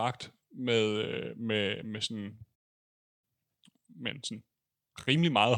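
It's a speech clip, and at 2.55 s it just drops out: a playback stall of about 0.67 s, silent until 3.24 s. Most likely the player ran dry or its thread got blocked, so output simply halted mid-flow. From 3.24 s right through to the end you get time-compressed catch-up. The player is trimming its backlog by cutting tiny slices and cross-fading them, so the speech runs about 1.15 times fast at normal pitch.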